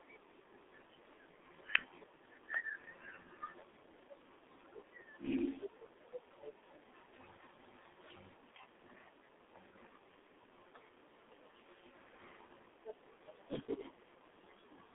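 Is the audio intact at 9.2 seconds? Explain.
No. At 9.2 seconds the speech carries G.723.1 codec damage, present throughout. Nothing above 3.8 kHz survives, and the line band runs about 250 Hz to 3.6 kHz. The slow 30 ms frames, fitting a roughly 6 kbit/s stream, leave it muffled, hoarse and with smeared consonants.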